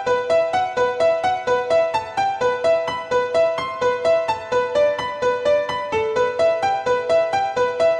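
Nothing is technically wrong with the clip, so there are no times or causes to give.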